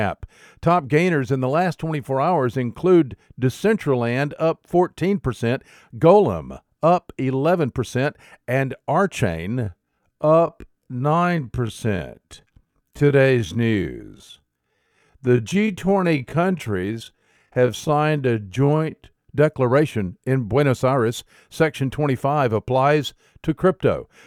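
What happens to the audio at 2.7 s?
Nothing goes wrong at 2.7 s; the speech carries on intact through that moment with no audible dropout, click, distortion or other fault.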